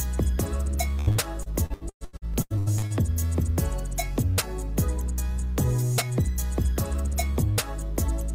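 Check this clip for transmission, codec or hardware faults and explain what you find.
One transmission fault is present. Repeated packet loss (robotic sound) runs from 0.99 to 2.93 s. Around a dozen dropouts, up to 115 ms each, are patched by extending earlier sound, covering about 38% of that stretch and making it choppy with pieces missing.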